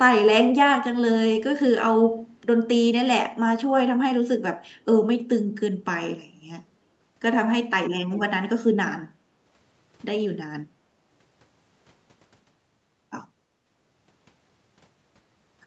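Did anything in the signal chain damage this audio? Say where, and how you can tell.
Yes. Echo leak at 8.12 to 8.25 s: a faint delayed copy of the speech, trailing by 326 ms and roughly 15 dB below it. This is likely the far-end loudspeaker sound getting past an echo canceller in the call processing and being sent back.

Background gated by the echo canceller at 9.16 to 9.25 s: the room tone dips by about 8 dB for around 70 ms, then recovers. The canceller clamped the microphone down while the loudspeaker was active, so the ambience briefly drops out.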